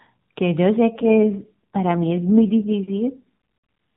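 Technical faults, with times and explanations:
0.94 to 2.73 s, AMR rate drop: the speech turns rougher and more synthetic with no gap or band change, which fits AMR-NB stepping down from 12.2 to 4.75 kbps.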